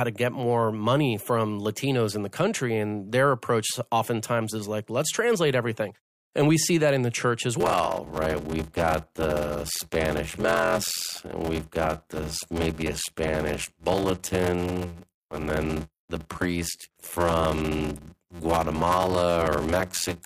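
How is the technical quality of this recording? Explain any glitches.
The recording has one clear fault: a block size mismatch (padded), from 7.60 s to the end. After that point, each block handed downstream is only partly filled with audio, and the remainder is zeros. A downstream stage reads larger blocks than the upstream stage supplies, which fits a 512-sample read. The regular gaps produce a buzz at about 86 Hz, and the speech plays back slower, at 0.625 times normal speed, while keeping roughly its natural pitch.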